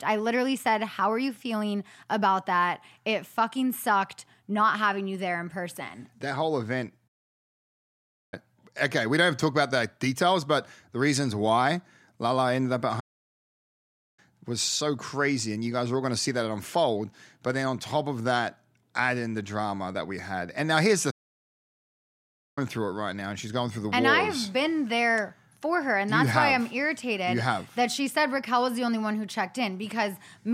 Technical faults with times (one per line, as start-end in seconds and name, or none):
7.07-8.34 playback stall
12.99-14.19 playback stall
21.10-22.58 playback stall